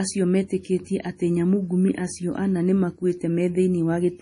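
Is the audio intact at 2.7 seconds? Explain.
No. Likely heavy MP3 compression across the whole clip, consistent with about 32 kbps, cuts everything above 10.6 kHz and leaves the speech watery and swirly.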